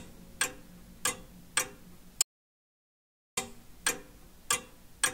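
At 2.22 s the sound cuts out abruptly and returns at 3.37 s, an audio dropout to silence lasting about 1.15 s, likely from the input link failing while recording continued. The waveform flatlines, and the spectrogram shows a fully blank band with no room tone.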